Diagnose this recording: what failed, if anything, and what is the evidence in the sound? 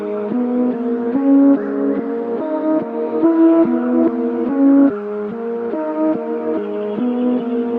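Nothing failed: the signal shows the ordinary behaviour of a WebRTC call path, with its high end rolling off at about 12 kHz in a way that fits an Opus encoder running around 48 kbps, and no dropouts, clipping, distortion or timing disturbances can be heard anywhere in the recording.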